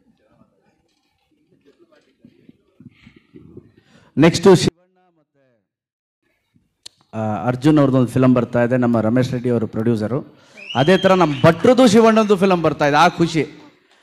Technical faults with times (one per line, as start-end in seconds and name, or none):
4.68-6.23 24-bit alignment error (too quiet)